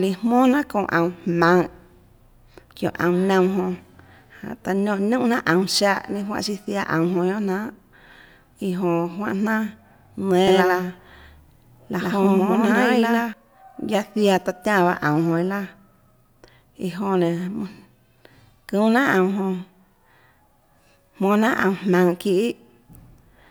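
From 10.47 to 13.33 s, a doubled audio track: an equally loud copy lags about a tenth-second, likely double capture, with waveform bursts repeating and abrupt edges.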